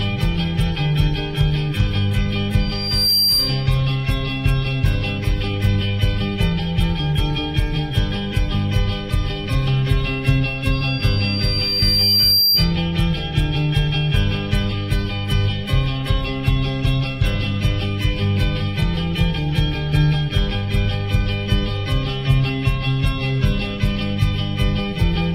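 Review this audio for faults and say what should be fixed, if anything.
Loudspeaker feedback squeal appears twice, from 2.59 to 3.82 s and from 10.72 to 12.76 s, both at 4.7 kHz. The microphone is hearing its own loudspeaker, and at that frequency the loop gain tops one, so the tone feeds itself, swelling in about half a second the first time and over roughly one and a half seconds the second, ending up a few dB above the sound. A spectrogram shows a bright horizontal line brightening toward its end, and the waveform's envelope grows steadily. Reduce gain or notch 4.7 kHz, and keep the microphone out of the loudspeaker's coverage.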